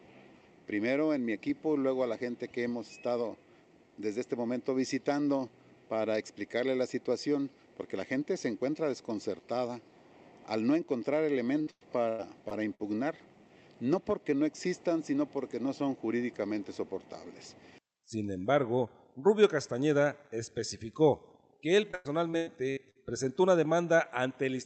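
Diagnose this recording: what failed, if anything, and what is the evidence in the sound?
Repeated packet loss (robotic sound) at the network stage, from 11.61 to 12.81 s and from 21.91 to 22.97 s. Both stretches turn choppy. Holes of up to 100 ms are patched by extending the preceding sound, concealing 27% and 32% of each span.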